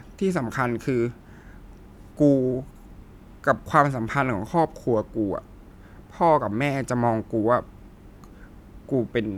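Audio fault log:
There is no fault in the speech.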